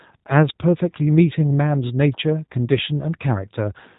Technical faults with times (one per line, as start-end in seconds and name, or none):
0.00-3.98 G.729 codec